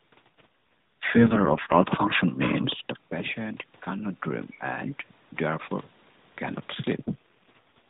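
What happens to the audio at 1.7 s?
At 1.7 s the speech sounds rough, buzzy and synthetic, though the band stays the same with no gap. This is an AMR rate drop from 0.31 to 1.89 s. A weak radio link forced the codec down to fewer bits, consistent with a fall from 12.2 to 4.75 kbps.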